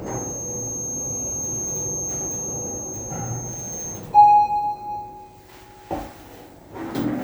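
A feedback whistle runs from the start of this everyday-sound recording to 4.05 s: a thin, steady tone at 6.4 kHz sitting a few decibels below the sound and swelling and fading slowly, likely from a loudspeaker-to-microphone loop held just at the edge of feedback.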